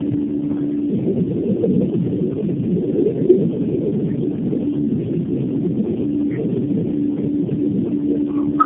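Throughout, the speech sounds rough, muffled and warbly, with nothing above 3.5 kHz. This is tandem speech coding. The degradation points to about four low-rate speech coders in a row, each decoding and re-encoding the previous one's already damaged output, so the losses compound.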